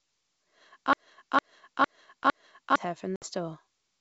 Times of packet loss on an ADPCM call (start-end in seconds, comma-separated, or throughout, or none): 3.16-3.27